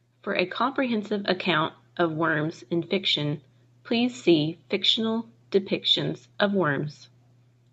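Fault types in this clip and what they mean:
Automatic gain rising, 0.24 to 1.5 s: gain control judges the input too quiet and lifts it by about 4 dB, so voice and background swell together.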